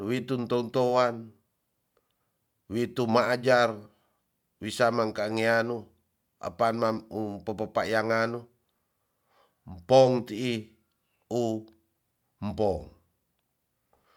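No technical faults are audible.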